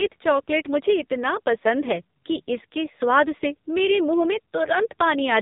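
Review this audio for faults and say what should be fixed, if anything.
The whole recording carries heavy AMR narrowband mobile codec damage. Nothing passes above 3.8 kHz, so the speech sounds boxed in and telephone-like. The codec rebuilds the voice from a vocal-tract model driven by a few pulses per short subframe. With too few bits, that model turns buzzy and synthetic. The coarseness fits a low AMR-NB mode around 5.9 kbps. To prevent it, record over a wideband path or use a much higher bitrate mode.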